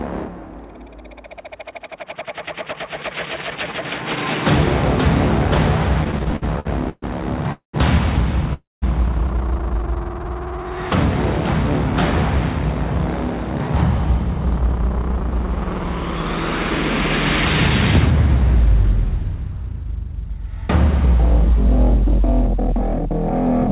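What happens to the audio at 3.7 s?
Nothing goes wrong at 3.7 s; the audio there is intact and carries only the steady character of the call path, band-limited with nothing above 4 kHz, as one would expect from G.711 mu-law coding.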